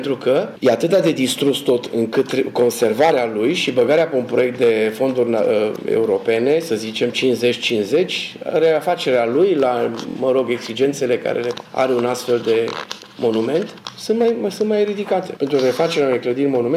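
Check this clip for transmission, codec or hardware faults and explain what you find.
There is one fault, a Bluetooth stutter from 10.10 to 10.16 s. A short buzzing repetition interrupts the sound, which then picks up further along. Packets failed to arrive, so the receiver looped its last slice, skipping about 46.4 ms of audio, which fits two dropped frames.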